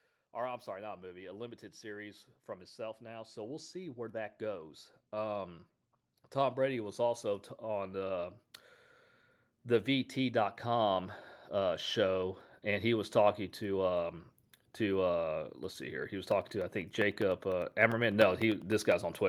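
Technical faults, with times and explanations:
0.31–4.41 s, 6.33–8.48 s and 9.64–13.07 s, automatic gain rising: the voice and the background noise swell together, by about 9 dB in the first stretch and about 5 dB in the other two, the last settling just before "talking to um to". The automatic gain control judged the input too quiet and raised its gain slowly, lifting everything at once.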